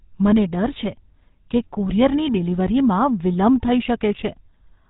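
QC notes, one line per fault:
Throughout, GSM full-rate codec: the speech has passed through the original GSM speech coder, at a rate that fits 13 kbps. It rebuilds the voice from a vocal-tract filter fed by sparse regular pulses. That leaves a plainly audible buzzy, gravelly roughness and no content above 4 kHz.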